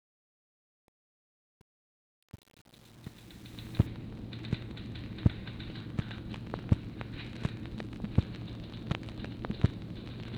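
A fade running from 0.0 to 3.87 s was processed at only 8 bits with no dither, causing truncation distortion on the fade. The quiet end of the fade collapses into coarse square steps, so the sound turns gritty.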